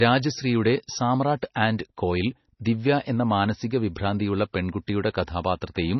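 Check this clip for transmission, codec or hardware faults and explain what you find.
One codec fault runs through the whole speech clip. The sound is watery and swirly, with nothing above 6 kHz. This is likely heavy MP3 compression, starved of bits in a way that fits a bitrate near 24 kbps.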